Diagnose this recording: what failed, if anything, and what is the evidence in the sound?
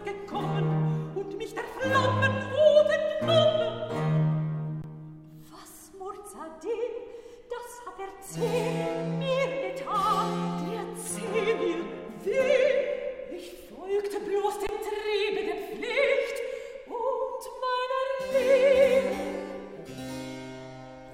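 The playback buffer ran dry twice, an underrun with held sample at the driver and buffer stage. At 4.82 to 4.84 s and again at 14.67 to 14.69 s, the converter received no new data and held its last output value, so the waveform flattens for 20 ms and the sound stops almost silently. About 20 ms of audio was lost each time.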